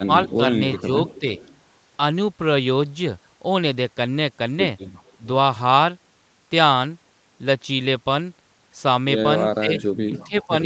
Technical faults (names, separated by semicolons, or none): speech suppressed in double talk; echo leak